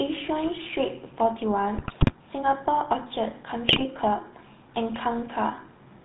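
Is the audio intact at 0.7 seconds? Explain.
No. At 0.7 seconds the speech carries GSM full-rate codec damage, as it does through the whole clip. This codec models the vocal tract as a filter. It drives that filter with a sparse train of regular pulses, keeping only one excitation sample in three. Nothing above 4 kHz gets through. The result is plainly audible here: a buzzy, gravelly roughness and a dull, band-limited tone. The sound fits a 13 kbps GSM full-rate stream.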